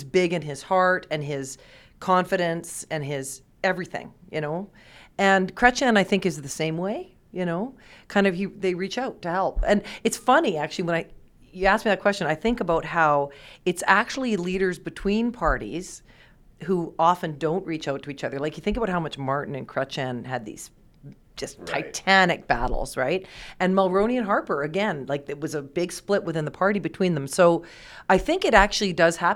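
Nothing in the recording stood out as a technical problem on listening.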